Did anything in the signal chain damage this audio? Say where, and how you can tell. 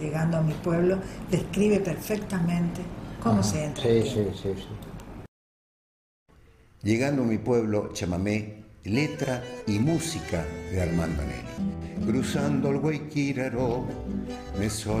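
No, nothing in the signal chain audibly damaged this audio, and every stage passes the signal along intact.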